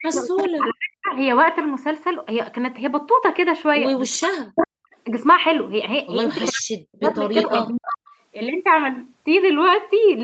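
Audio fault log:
0.0–1.12 s, 4.16–4.92 s and 6.52–7.67 s: speech suppressed in double talk. With both sides likely talking at once, the echo canceller could not tell the near talker from loudspeaker echo and pulled the whole signal down. The speech sags and breaks into fragments, falling by as much as about 40 dB at its deepest. About a second of the first stretch is affected, roughly 0.7 s of the second and about half a second of the third.
0.17–0.73 s, 4.56–4.67 s, 6.41–6.61 s and 7.06–7.97 s: echo leak. A loudspeaker-side echo canceller likely left part of its microphone pickup in place and sent it back down the call. A delayed copy of the speech can be heard under the live signal. In the first run it trails by 410 ms at about 10 dB below the speech. The later runs trail by 335 ms, at about equal level around 4.6 s, about 10 dB down near 6.5 s and about 5 dB down in the last.
7.97–8.19 s: background gated by the echo canceller. 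While the loudspeaker was still active, the canceller clamped the microphone hard. For roughly 0.2 s the room sound falls away by up to about 40 dB, an abrupt hole in the ambience, and it snaps back once the canceller releases. The gap stands out against a background that, like the speech, carries nothing above 8 kHz.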